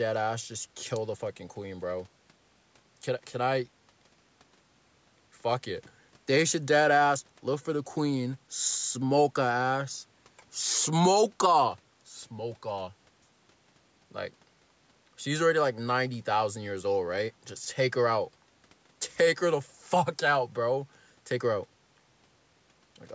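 Listening to this speech recording, nothing stood out as a technical problem; its top end stops at about 8 kHz and the lowest bass is trimmed, as expected from normal call microphone processing.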